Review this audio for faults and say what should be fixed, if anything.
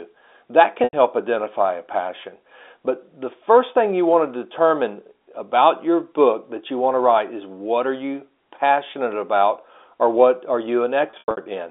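Packet loss with pitch repetition at 0.84–0.93 s, before "identify a passion", and 11.1–11.46 s, after "about or what are": missing audio, 90 ms then 210 ms scattered, bridged by a repeated, buzzy pitch period. Adding jitter buffering or forward error correction on the network path would prevent these gaps.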